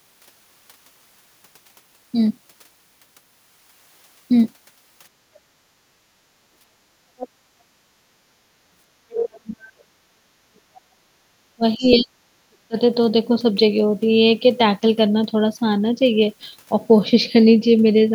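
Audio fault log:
5.97–6.35 s, 6.70–7.77 s and 11.05–11.28 s, background gated by the echo canceller: While the far end played through the loudspeaker, the echo canceller clamped the microphone path hard. The room tone sinks by about 9 dB in the first stretch, about 11 dB in the second, and about 20 dB in the brief third, for roughly a third of a second, most of a second and a fifth of a second. It then swells back as the canceller releases.
7.18–7.28 s, 10.75–10.81 s and 11.85–11.96 s, other side's voice leaking through: The echo canceller likely left part of the loudspeaker signal in the microphone feed. A second voice surfaces in short scraps, each lasting about a tenth of a second or less. It sits roughly 15 dB below the main talker in the first, far lower at around 35 dB down in the second, and closest at roughly 10 dB down in the third.
9.11–10.77 s and 11.56–12.77 s, speech suppressed in double talk: With both ends likely talking at once, the canceller could not tell the near talker from echo and pulled everything down. 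The main voice dips, dulls and breaks up in pieces. In the first stretch it is held down for most of the span, around one and a half seconds, at up to roughly 35 dB. In the second the cuts total under a second and reach roughly 40 dB.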